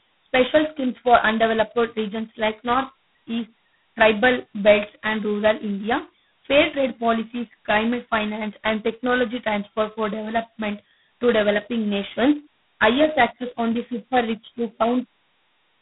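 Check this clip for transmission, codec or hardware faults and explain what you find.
One codec fault runs through the whole clip: G.726 ADPCM at its lowest rate. It lasts throughout. The coder sends only a tiny difference from a predicted sample. The coarse steps add a harsh rasping hiss that rises with the speech. The heavy rasp fits 16 kbit/s. The sound is confined to about 150 Hz to 3.6 kHz, with nothing above 3.9 kHz.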